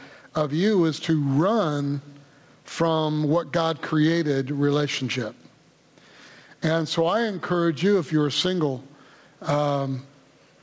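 Gain pumping runs throughout the clip: the level swings by roughly 15 dB as something clamps down on each loud sound and releases in the gaps. This likely comes from input gain set far too high, with a fast limiter or compressor riding it. Quiet and loud passages are squeezed toward one level, while the audio, which has nothing above 8 kHz, fits a G.722 call codec at 64 kbps.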